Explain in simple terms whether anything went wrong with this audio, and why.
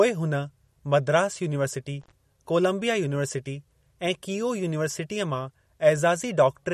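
Two things went wrong here. The first runs through the whole speech clip: everything above about 13.1 kHz is simply missing, so it sounds dull and watery, with a swirly, metallic edge on the hissy sounds. That's most likely MP3 compression squeezed too hard. When the encoder runs short of bits, it chops off the top end and drops the quiet detail, and that detail flickers in and out.

The second is a brief intermittent contact between 2.01 and 2.12 s. Think of a loose plug or cable letting go for an instant. The sound drops out for about 49 ms, with crackle on either side where the connection breaks and then makes contact again. It's short: a tiny stutter with a scratchy edge.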